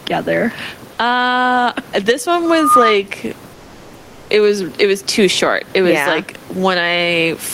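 It's a speech clip with gain pumping running right through it. The room noise sits about 31 dB under the speech, and the gain swings by roughly 10 dB, likely because the input gain is set way too hot and a fast limiter keeps clamping it. Just after "uh this", from 2.45 to 3.02 s, there's loudspeaker feedback squeal: a 1.2 kHz tone climbs over about a third of a second until it sits a few dB above the speech, the mic and speaker forming a loop with more than unity gain at that frequency. Then from 3.53 to 4.29 s, right before "it was it was", the real background drops out for about 760 ms and is replaced by comfort noise, a flat, featureless hiss roughly 2 dB quieter. It sounds like the sender's voice detector cut transmission, which fits Opus DTX, and the receiver filled the gap with synthetic noise.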